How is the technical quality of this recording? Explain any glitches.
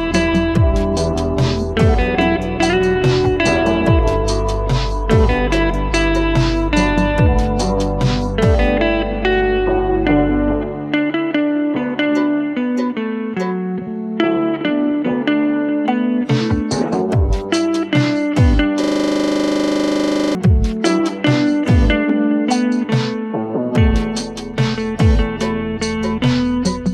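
One glitch stands out: a system hang loop from 18.84 to 20.35 s, where the playback system froze and the hardware kept replaying the same 40 ms buffer dozens of times. The result is a rough buzz at 25 Hz, and the waveform shows an identical repeating block with matching vertical stripes on a spectrogram.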